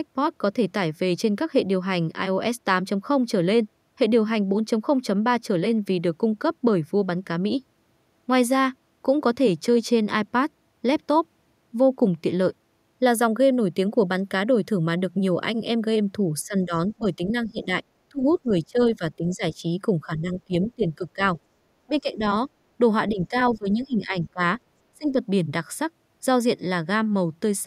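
A speech clip with speech suppressed in double talk at 16.4–17.7, 18.1–19.6, 20.1–21.2, 21.9–22.2, 23.1–24.4 and 24.9–25.2 s. The voice drops by roughly 15 to 25 dB, likely from an echo canceller muting during overlapping talk. The other side's voice leaks through faintly at 23.55–23.72 s, roughly 25 dB below the speech, likely from echo the canceller missed.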